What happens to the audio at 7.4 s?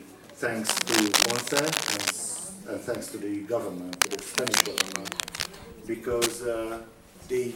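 Nothing goes wrong at 7.4 s; the audio there plays through intact, with no dropout, click or distortion.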